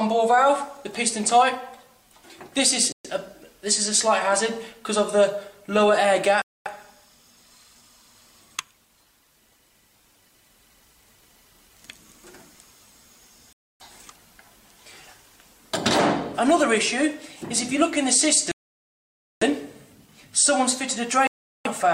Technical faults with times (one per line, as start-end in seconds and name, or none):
2.92-3.06 Bluetooth stall
6.42-6.68 Bluetooth stall
13.53-13.82 Bluetooth stall
18.51-19.43 Bluetooth stall
21.27-21.67 Bluetooth stall